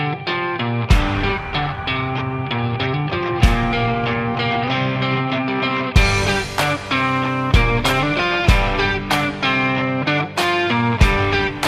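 Nothing is technically wrong with this audio.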